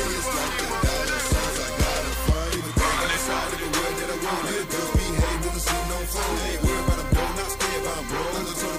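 No technical faults can be heard anywhere in the clip. Nothing in the sound points to a break, glitch or distortion at any moment.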